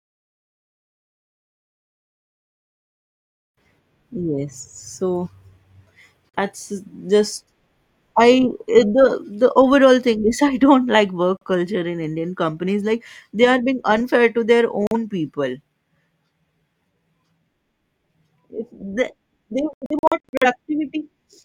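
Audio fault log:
6.30 s, 11.37 s, 14.87 s: digital broadcast dropout. Single failed frame muted the receiver, leaving brief holes of about 43 ms of missing speech each.
19.73–20.47 s: digital broadcast dropout. Repeated frame failures muted playback in several short holes, the longest about 85 ms, losing about 0.34 s of speech.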